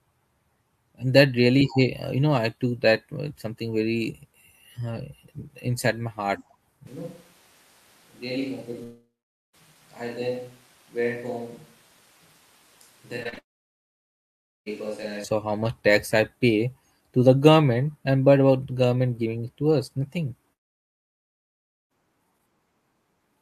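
Switch to a distant microphone, from 6.87 s to 15.24 s, right after "uh inside my heart": the sound abruptly turns roomy and hollow with thinner bass, about 10 dB quieter, with room noise about 25 dB below the speech. The likely cause is the close microphone dropping out and a farther pickup taking over, until the close sound returns just as suddenly at 15.24 s.

Long network dropout, from 8.83 s to 9.55 s: about 0.7 s of audio likely never arrived. The receiver stretched the last sound into a fading buzz, then about 0.46 s of silence follows before the audio resumes, with that stretch lost.

Short concealed packet loss at 13.23 to 13.27 s, 13.29 to 13.34 s and 13.34 to 13.38 s: a few hundredths of a second went missing each time. The decoder patched each gap by extending the preceding sound for 17, 34 and 23 ms, which gives a rapid smeared flutter.

Long network dropout again from 13.38 s to 14.68 s follows straight on, with likely 1.28 s missing and about 1.24 s of near silence after a brief fading fill. 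Another occurs from 20.53 s to 21.92 s, just after "it to us nothing", where about 1.38 s is likely lost and almost all of it is silent.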